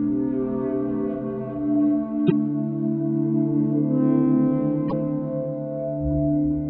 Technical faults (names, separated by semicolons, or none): damaged data in a compressed stream